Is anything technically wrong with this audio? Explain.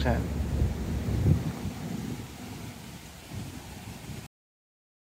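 Yes. At 4.27 s the audio has a cut-off end: the final buffers never played, so sound stops mid-event and drops straight to digital silence without decay.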